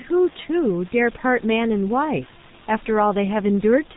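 From start to end, the speech carries heavy G.723.1 codec damage. Nothing above 4 kHz survives, so it sounds muffled. The voice model updates slowly across long frames. That leaves a hoarse, rough texture and smeared consonants. The coarse quality fits a bitrate near 6.3 kbit/s. Room noise sits about 22 dB below the speech.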